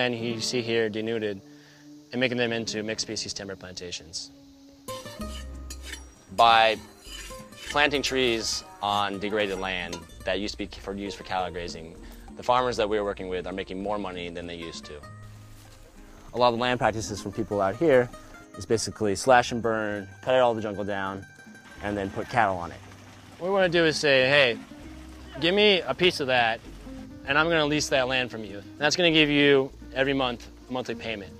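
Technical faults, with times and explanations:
No technical faults can be heard in this clip.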